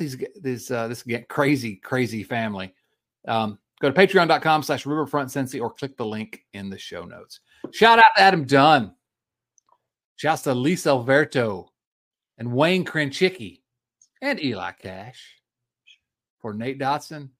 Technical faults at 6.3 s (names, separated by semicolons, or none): none